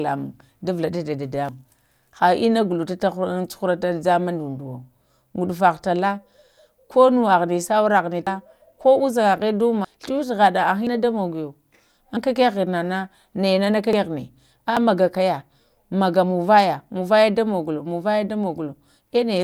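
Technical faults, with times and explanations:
1.49, 8.27, 9.85, 10.87, 12.17, 13.93 and 14.77 s, dropped buffer (overrun): at each point the speech jumps forward with no gap of silence. Most skip about a tenth of a second, while 8.27 s loses around a fifth and 9.85 s nearly a third. The likely cause is samples overwritten before being read. Unlike an underrun, nothing pauses or goes quiet; material simply vanishes.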